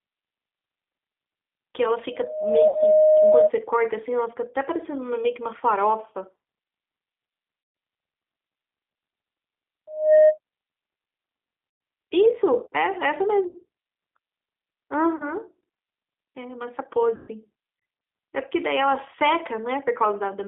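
Throughout, the speech passes through the G.729 codec at 8 kbit/s, which rebuilds it from a filter and pulses inside a band of roughly 250 Hz to 3.6 kHz, leaving it thin, rough and plainly synthetic.

From 2.12 to 3.51 s, a loudspeaker feedback squeal occurs as the microphone's loop gain exceeds one at 619 Hz. A steady tone swells over about half a second to roughly 10 dB above the speech.

At 2.68 s, within that squeal, VoIP packet loss concealed by the speech codec begins. About 60 ms of audio goes missing, and the decoder stretches its last pitch and filter into a fading buzzy or noisy sound.

At 7.61 s, a 140 ms loss is concealed the same way, with a longer fading buzzy or noisy stretch followed by weak speech as the decoder recovers.

From 9.87 to 10.38 s, the same 619 Hz feedback squeal returns, building in about a third of a second to roughly 10 dB above the speech.

Further concealed losses occur at 11.70 s (110 ms), 13.48 s (70 ms), 15.16 s (40 ms) and 17.16 s (120 ms). 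Each becomes a brief fading buzzy or noisy stretch, followed by briefly weakened speech.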